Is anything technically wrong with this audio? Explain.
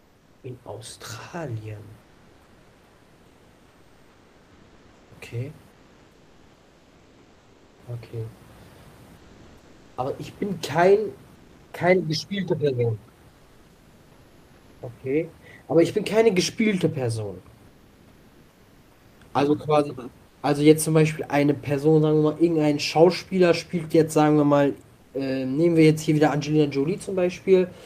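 Yes, there's comfort noise in place of the background in the pauses at 0–0.43, 2.05–5.11, 5.71–7.75, 9.19–9.97, 11.35–11.71, 13.33–14.77, 17.71–19.15 and 20.29–20.41 s. The real room noise, about 32 dB below the speech, drops out and a flat, featureless hiss about 1 to 4 dB quieter takes over. That's likely discontinuous transmission: the sender goes quiet when it hears no speech, and the receiver fills the gap with synthetic noise.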